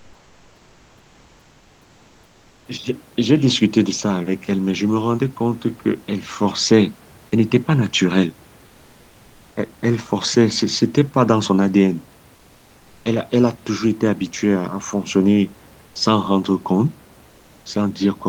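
From 0.0 to 2.65 s and 12.37 to 13.03 s, comfort noise in place of the background swaps the textured room noise for a steady, featureless hiss, about 3 dB and 2 dB quieter, likely from discontinuous transmission. Spectrograms show flat, uniform bands; the waveform's noise floor dips.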